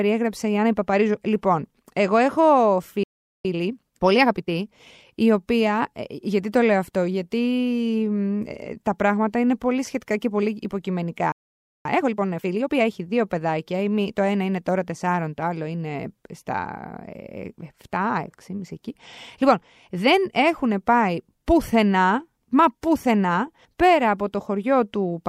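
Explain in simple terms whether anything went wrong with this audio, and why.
Two things went wrong in this speech, and they happen twice.

The first is a playback stall. At 3.03 s the speech cuts out for about 0.41 s, until 3.45 s. At 11.32 s it stops again for about 0.53 s, until 11.85 s. The silence lands in mid-flow, not at a natural pause. The likely cause is that the player ran short of audio data or was briefly held up. It then waited until it could continue.

The second is time-compressed catch-up. Each stall leaves the player running late. To close the gap, it snips out tiny slices of audio and blends the edges together. From 3.45 s to 5.09 s the speech runs at 1.25 times normal speed. From 11.85 s to 12.91 s it runs at 1.5 times. The pitch stays the same, so it sounds hurried rather than squeaky.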